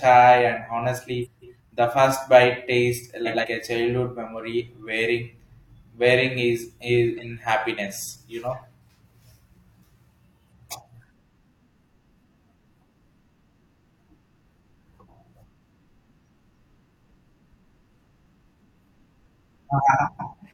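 Speech with four short frames out of order faults, where neighbouring blocks of audio were decoded in swapped order, producing a garbled flutter: 1.25–1.59 s just before "the first bite tastes" (blocks of 170.7 ms), 3.25–3.45 s between "the first bite tastes" and "a childhood memory wearing" (85.3 ms), and 17.48–17.73 s and 20.06–20.34 s (128 ms each). Unlike a dropout or repeat, nothing is lost or duplicated and the timing stays intact.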